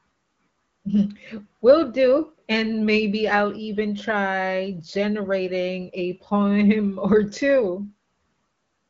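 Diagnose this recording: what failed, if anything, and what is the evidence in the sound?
Nothing failed: the speech comes through an AMR wideband (HD Voice) path at 15.85 kbit/s, with only light coding texture and no content above 7.5 kHz, as that codec's bandwidth implies.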